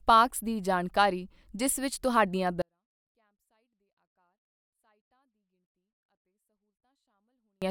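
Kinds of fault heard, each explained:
24-bit alignment error (too quiet): 24-bit samples read as 32-bit words, so from 2.62 s speech drops about 48 dB; waveform flattens abruptly, spectrogram goes nearly blank.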